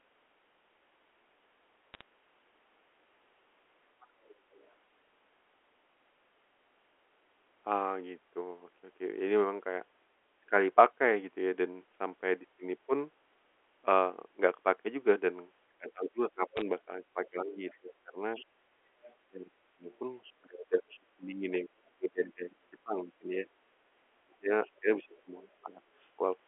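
Bit errors on a digital phone line appear from 1.94 to 2.01 s as a short burst of sharp ticks. Flipped bits on the line corrupt single samples, and the damaged samples jump abruptly.

From 4.01 to 4.7 s the other side's voice leaks through, faint and about 30 dB below the speech. The likely cause is an echo canceller leaving loudspeaker sound in the microphone signal.

Speech is suppressed in double talk from 15.69 to 18.2 s. The talker's level dips by up to about 25 dB in pieces, for roughly one and a half seconds in total. Echo suppression likely attenuated both voices when they overlapped.

The leaking far-end voice returns from 15.89 to 20.25 s, slightly stronger at about 25 dB below the speech, and overlaps those dips.

A second cluster of bit errors produces crackle from 16.57 to 16.62 s, at a somewhat higher error density than the first.

Double-talk suppression recurs from 19.29 to 25.81 s, with pieces of the talker's speech dropping by up to about 25 dB across roughly four seconds.

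A final faint leak of the far-end voice, at about 30 dB below the speech, sits from 24.66 to 25.52 s, all within the narrow telephone band.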